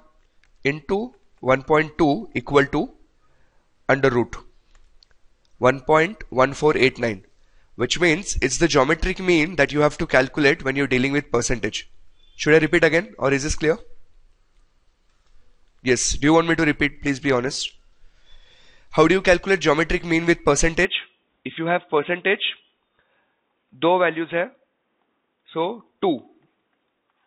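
At 20.85 s the sound abruptly turns duller and boxier and stays that way to the end, with no gap at the change, most likely because the input switched to a poorer device. The band now stops at about 3.8 kHz, so a spectrogram shows everything above that line suddenly empty. A faint new noise floor sits far below the signal, and the waveform steps down to a level roughly 5 dB quieter.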